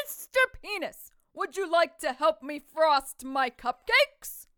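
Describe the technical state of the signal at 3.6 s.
Nothing is wrong with the signal at 3.6 s; the sound passes through intact there.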